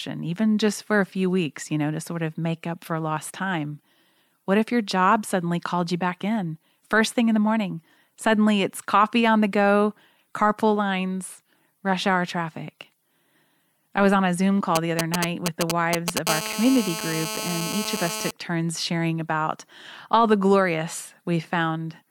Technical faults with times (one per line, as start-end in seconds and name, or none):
14.76-16.19 GSM signalling bursts
16.27-18.31 GSM phone buzz